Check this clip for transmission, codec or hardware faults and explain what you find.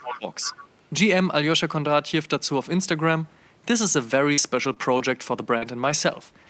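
Three faults turn up, two tangled together at the very start and one cluster near the end.

From 0.00 to 0.26 s, speech suppressed in double talk: an echo canceller likely confused overlapping talk with echo, pulling the speech down by about 15 dB.

From 0.13 to 0.19 s, the other side's voice leaking through: residual loudspeaker echo likely escaped cancellation, leaving a faint second voice about 15 dB below the speech.

From 4.33 to 6.16 s, scattered short gaps: about four lost or late packets, the longest around 40 ms, totalling 120 ms missing and 140 ms rebuilt, heard as brief smeared hiccups.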